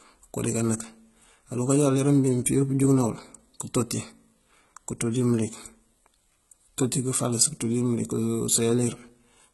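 HE-AAC compression, present throughout the speech, is the likely source of the damage heard here. The codec keeps only the lower spectrum and synthesises the treble by copying lower bands upward under a coarse envelope, so the top end sounds bright but false, with harmonics that no longer line up. Sibilants turn gritty and lispy, with a metallic edge, and the heavy damage fits a very low bitrate, around 16 kbps.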